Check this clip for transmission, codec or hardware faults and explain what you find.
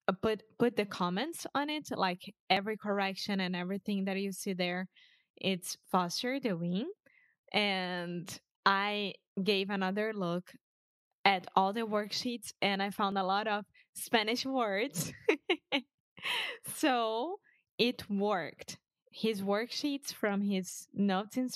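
Three short discontinuities turn up, all of the same kind. Dropped buffer (overrun) at 2.57 s, 13.12 s and 16.43 s: the sound jumps ahead with no gap, likely because the recording software missed a buffer before the hardware overwrote it. Roughly 20 ms, 5 ms and 10 ms are skipped.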